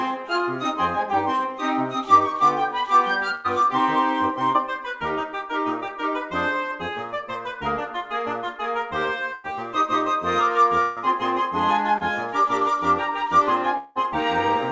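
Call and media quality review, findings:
Burst of packet loss at 3.35–3.47 s, 9.35–9.47 s and 10.82–10.99 s. Last sound held and faded over the gap, then audio resumes further on. About 90 ms missing in the first two, 150 ms in the third, with no true silence. Receiver-side concealment in the jitter buffer/decoder extrapolated the final frame across several consecutive lost packets and attenuated it. Band limit at 8 kHz throughout, consistent with a G.722 wideband call path at 64 kbps.

Short concealed packet loss at 4.52–4.58 s and 11.98–12.03 s. Brief smear/wobble, roughly 25 ms of synthesized fill covering about 30 ms of lost audio. Decoder PLC continued the preceding signal, pitch-based or shaped noise, then crossfaded back into received audio. Transient detail inside each gap is lost. Late or dropped packets, jitter buffer unable to recover in time.

Long network dropout at 13.77–13.98 s. 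About 180 ms of audio absent, bridged by fill that decays instead of cutting to silence, so no dead air. Likely cause: network-level interruption, with no packets arriving for the full stretch. Concealment stretched to its limit, and audio after the gap resumes without the missing segment. Longest event in the clip, near the end.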